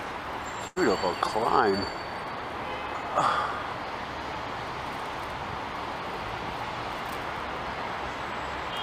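At about 0.67 to 0.78 s there's a burst of packet loss: the receiver stretches and fades the last sound across roughly 86 ms, then jumps ahead with about 80 ms missing.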